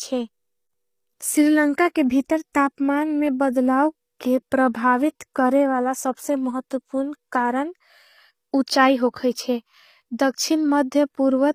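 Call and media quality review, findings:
HE-AAC compression, throughout: s sounds gritty and lispy, treble synthetic, nothing above 15.5 kHz. Unlike plain low-pass, the top band is present but rebuilt from copied lower bands, likely from a low-bitrate encode near 24 kbps.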